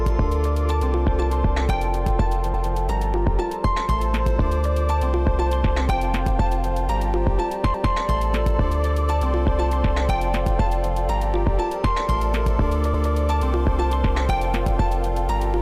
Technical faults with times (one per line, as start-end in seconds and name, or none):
2.54-2.74 overlapping chunks
7.74-7.94 overlapping chunks
12.94-13.14 overlapping chunks